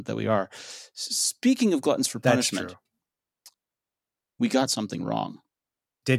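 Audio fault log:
2.27 s, electrical switching spike: a single sharp snap, only a few milliseconds long, sits on top of the speech and peaks somewhere around -20 dBFS. It is likely a nearby switch or static discharge arcing and being picked up by the audio line. Unlike a digital dropout or buffer glitch, the speech underneath never breaks or goes silent. The snap is simply added over it, and its hard, broadband crack is unlike the softer tick of a mouth click.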